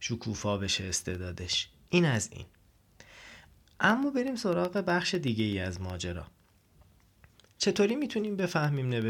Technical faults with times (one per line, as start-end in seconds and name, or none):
0.65-9.02 periodic USB or driver dropouts